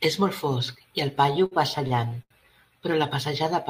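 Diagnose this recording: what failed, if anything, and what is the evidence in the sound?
The failure is in the network and jitter-buffer stage: repeated stalls (stutter) between 1.33 and 2.33 s. The speech hitches six times in that second, with about 190 ms in total filled by continuation of the preceding sound, roughly a fifth of the span. The longest hold is 82 ms. Packets arrived late or slower than playout, so the buffer kept running dry and the receiver extended the last audio until data resumed. Nothing is lost, but the delivery drags and stutters.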